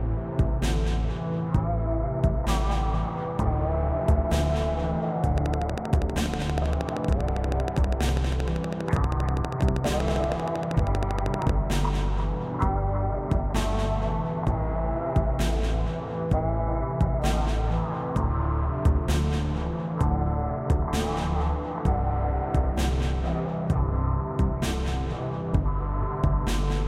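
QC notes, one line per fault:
5.38–11.50 s, train of clicks: regular ticking at 12.6 clicks per second, around seventy near-identical pulses peaking roughly 10 dB above the audio and audible over everything. Likely interference from nearby equipment or a faulty connection or power supply injecting a repeating pulse.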